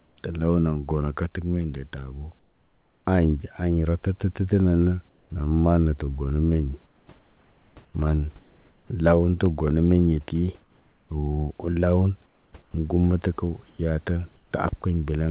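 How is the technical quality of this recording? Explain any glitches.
The speech carries two kinds of glitch: repeated stretches where the background turns synthetic, and one very short dropout. Throughout, the band stops at 4 kHz, which fits a G.711 A-law call codec, and the room noise sits about 38 dB below the speech.

Comfort noise in place of the background occurs at 0.00–0.17 s, 2.39–3.05 s, 5.09–5.30 s, 6.86–8.90 s, 10.61–11.09 s, 12.26–12.74 s and 13.70–14.51 s. In these pauses the real room background gives way to a smooth, even hiss, which drops by about 8 dB at the start and by about 3 to 4 dB in the later pauses. The likely cause is discontinuous transmission: the sender stopped sending during pauses and the receiver generated shaped noise until speech resumed.

A block of digital silence falls at 9.46 s and lasts about 0.73 ms, which fits a block of about 32 samples being zeroed. 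It is too short to hear as a hole and comes across as a single tick. The signal drops straight to zero and returns with no fade, and these hard edges produce the click. Such a block typically appears when the output buffer is not filled in time.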